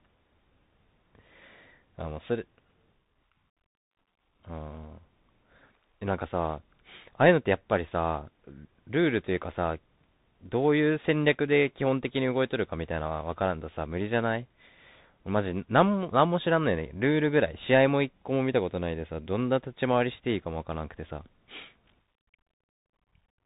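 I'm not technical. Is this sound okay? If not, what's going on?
No. From start to finish, the speech has gone through a Bluetooth CVSD headset codec, an old phone-call format. Nothing above about 3.8 kHz survives, so it sounds muffled. The coding itself is plainly audible: a grainy, rough edge on the voice.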